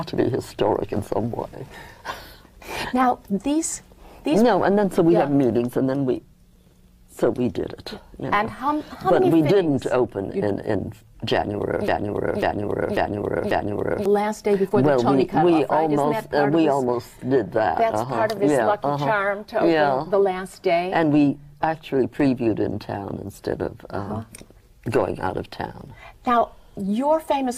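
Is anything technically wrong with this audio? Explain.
Yes. From 11.88 to 14.06 s there is a broken-record loop: a 0.54 s fragment repeats four times, likely from a stalled player or stream, and the audio for that span is lost.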